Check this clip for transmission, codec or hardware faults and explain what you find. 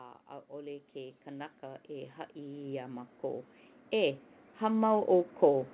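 One fault stands out, an automatic gain rising effect. The call path itself is band-limited, with nothing above 4 kHz, which fits a narrowband G.711-style telephone codec.

From 0.05 s through to the end at about 5.74 s, the level climbs steadily. The automatic gain control judged the input too quiet and kept raising its gain in small steps rather than settling. Because the gain applies to the whole signal, the speech and the background noise swell together, so the room noise grows as the voice gets louder.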